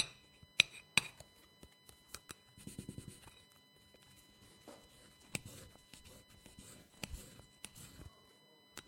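A recording of everyday sounds carries USB whine from start to finish: a fixed-pitch tone at 1 kHz with its strongest component at the 4 kHz multiple, sitting roughly 25 dB below the sound. Its pitch locked to the 1 ms USB frame rate, rather than 50 or 60 Hz and their harmonics, is what sets it apart from mains hum. From 6.81 to 6.92 s, about 85 ms, there is AAC frame loss with concealment, consistent with four lost frames. Instead of a gap of silence, the decoder rebuilds the missing span from the last good spectrum, producing a smeared, noisy or phasey patch. That filled-in texture distinguishes it from a plain dropout or a mute.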